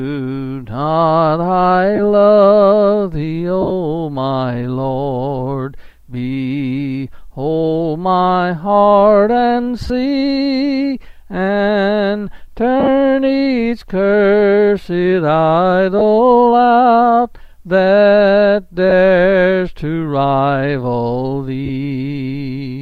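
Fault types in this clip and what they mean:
Lost LE Audio frames: at 1.96, 3.61, 9.82, 12.80, 15.99, 18.90 and 21.66 s, short gaps of 15 to 68 ms, consistent with 7.5 ms frames, are filled by the LC3 decoder repeating the last spectrum with randomised signs, giving brief noisy smears.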